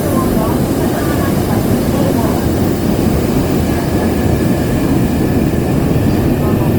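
Throughout the audio, tonal parts sound rough, grainy and noisy rather than clean, while the top end still reaches about 20.2 kHz. This is likely Opus compression in its CELT music mode at a low rate, consistent with about 24 kbps, filling starved bands with folded or noise content.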